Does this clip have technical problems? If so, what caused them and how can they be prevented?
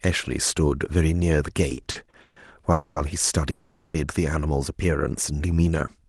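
Yes. Repeated stalls (stutter) run from 1.69 to 2.37 s: the speech halts seven times, with about 300 ms of filled-in sound and the longest gap 150 ms, so concealment covers 44% of that span. Packets were arriving later or more slowly than playback consumed them, leaving the jitter buffer repeatedly empty while the receiver stretched the last sound until data caught up. Nothing is lost, but the speech drags. A larger or more adaptive jitter buffer and a steadier network route would prevent it.

Call audio freezes occur at 2.72 to 2.97 s, filling 240 ms, and at 3.50 to 3.95 s, filling 440 ms. In each, the speech stops advancing and the last sound is held as a fading buzz or hiss that never drops to silence. Then the speech resumes exactly where it stopped, so nothing is missing and the rest of the clip arrives 240 ms and then 440 ms later than before. The likely cause is packets held up in transit, draining the jitter buffer. 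Reducing congestion on the link, or prioritising call traffic, would prevent these freezes.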